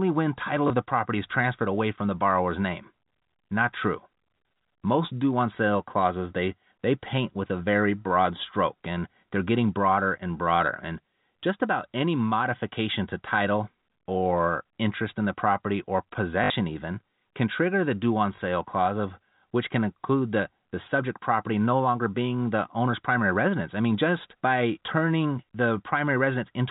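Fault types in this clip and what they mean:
Packet loss with last packet repeated: Short stretches of audio were lost, and the receiver filled each gap by playing the last packet again. The repeat seldom lines up with the pitch. The gaps near 0.68 s and 18.36 s last 20 ms each, which fits 20 ms packets. The gap after "in the property or" at 16.44 s runs 60 ms and buzzes at 50 Hz, a brief robotic stutter.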